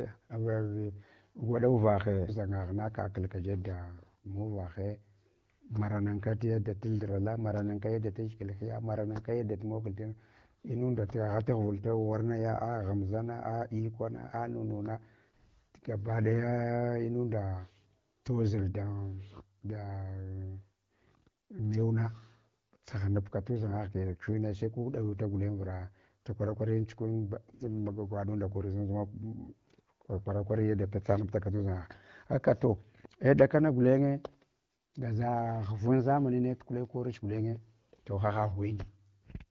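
The speech carries the band-limited character of an AMR wideband (HD Voice) link running at a mid rate that sounds consistent with about 12.65 kbit/s, with only light coding texture and no faults to be heard.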